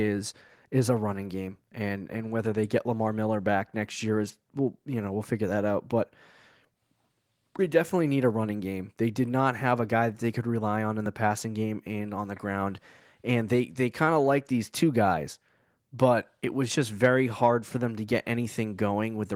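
No technical faults can be heard in the speech. The Opus voice compression keeps the full band in its hybrid mode and leaves only a light coding texture, which fits a rate of around 24 kbps.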